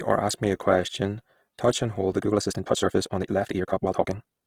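A speech recording that has likely been through Opus compression at a low rate, in the codec's music-oriented CELT mode, where the encoder keeps each band's energy but fills bands it cannot afford with noise or folded copies of lower ones. The damage is plainly audible: the full bandwidth is kept, but the tonal parts of the voice come across rough, grainy and noisy, which fits a bitrate of around 16 kbps. From 2.18 s to the end, the audio has likely been squeezed in time by software, speeding that stretch up by a factor of about 1.73 while holding the pitch, which it does by dropping short pieces. The pace lurches forward abruptly at that point with no change in pitch, and the rest sounds rushed.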